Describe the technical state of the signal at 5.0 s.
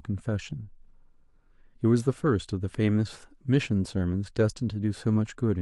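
At 5.0 s the speech signal is intact, with no fault present at that moment.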